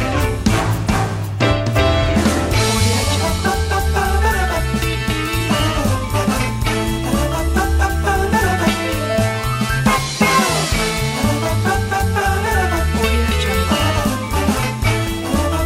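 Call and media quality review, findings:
Loud pop, 15.07–15.10 s, single event. Likely a voltage step or pulse entering the path, from a plug, switch, static discharge or driver glitch. Downstream circuits shape it into a brief transient. Symptom: one sharp pop lasting under 30 ms, peaking a few dB above the programme level, sitting on top of the sound, which carries on uninterrupted beneath it. Near the clip's end.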